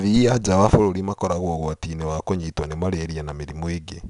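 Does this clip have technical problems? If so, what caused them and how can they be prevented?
Yes. Throughout, 4-bit ADPCM compression codes each sample as a coarse predicted step, so plainly audible gritty hiss tracks loud speech, with nothing above 10.7 kHz, which fits roughly 89 kbps. Prevent it by keeping the speech as linear PCM or a modern perceptual codec.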